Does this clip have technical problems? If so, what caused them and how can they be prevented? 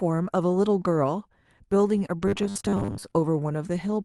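Yes. Short concealed packet loss: around 2.07 to 2.11 s, about 20 ms of audio never arrived in time. The decoder extrapolated the preceding sound, leaving a brief smear. Better network conditions or a deeper jitter buffer would prevent it.

Robotic sound from repeated short buffers: from 2.28 to 3.14 s, audio was likely arriving too seldom, so roughly half was replaced by 10 ms repeats. This forces a rigid, metallic 100 Hz buzz. Steadier audio delivery with larger, more regular buffers would prevent it.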